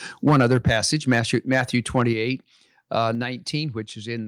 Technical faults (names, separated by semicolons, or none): microphone overload; microphone volume stepped down